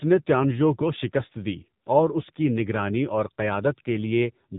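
From start to end the speech carries AMR narrowband mobile codec damage. Nothing passes above 3.8 kHz, and the heavy buzzy, synthetic quality fits the low 6.7 kbps mode. On a spectrogram the energy stops at a flat ceiling, with smeared, blocky harmonics.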